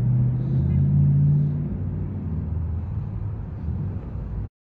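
Right near the end, from about 4.42 to 4.48 s, there's damaged data in the compressed stream. A stretch of the encoded bytes was corrupted, so the decoder couldn't read those frames properly and had to resync, leaving roughly 66 ms of broken-up sound.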